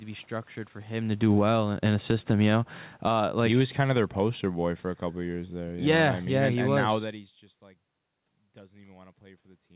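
Just after "be structured for him", at 1.08 s, automatic gain falling begins. The gain control judges the input too loud or its background noise too strong. It pulls the level down about 12 dB by 1.62 s. The room noise sinks with the speech. From 1.53 to 4.02 s, automatic gain rising lifts everything about 3 dB in a slow swell. Two more falls cut across it. The first takes about 8 dB off from 2.18 to 3.23 s. The second takes about 9 dB off from 3.94 to 7.43 s. Each time, speech and background drop together.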